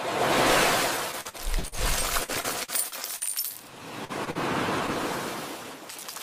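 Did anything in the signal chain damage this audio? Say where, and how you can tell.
Yes. Repeated packet loss (robotic sound) at 1.11–1.75 s and 2.24–3.24 s: the network dropped packets in bursts of six and then five gaps, which the receiver filled by extending earlier sound, so it comes out choppy.

Short concealed packet loss at 4.05–4.12 s and 4.31–4.38 s: about 40 ms never arrived each time, and the patch from preceding sound leaves a brief smear.

A short stall from a late packet at 4.25–4.30 s: the jitter buffer emptied, so the last sound was held about 21 ms longer, with nothing lost.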